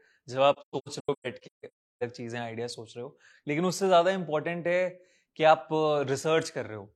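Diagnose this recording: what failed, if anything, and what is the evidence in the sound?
AAC frame loss with muting, 0.53 to 2.03 s, at the codec stage: the speech drops into repeated soft-edged silences totalling about a second across 1.5 s, the longest gap roughly 300 ms, which fits around two dozen lost frames. The decoder zeroes missing frames, and overlapping windows fade each gap.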